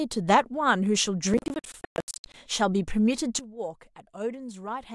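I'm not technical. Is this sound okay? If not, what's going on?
No. From 1.34 to 2.34 s there is processor overload crackle. The computer handling the audio got too busy to deliver each small chunk of sound on time, and chunks of roughly a fiftieth of a second went missing again and again, some dozens in all. Each missing chunk became a tiny hole of silence with sharp edges, so for that one second the speech sounds torn and crackly, then clears when the strain passes.

At 3.39 s comes a sudden gain jump. The likely cause is a volume setting being changed instantly instead of faded. Everything, the speech and the background noise alike, drops to a clearly quieter level in one step, and it stays that low right to the end of the clip.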